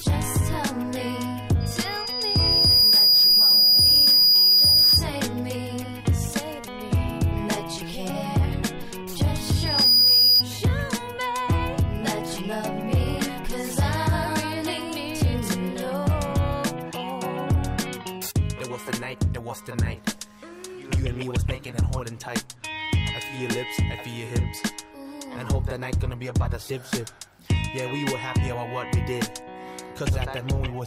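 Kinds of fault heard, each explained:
Loudspeaker feedback squeal, 1.60–5.05 s and 9.52–10.44 s: the microphone picks up its own loudspeaker, and at 4.9 kHz the loop gain exceeds one, so that tone swells by itself, over about a second, then under half a second, to roughly 10 dB above the sound.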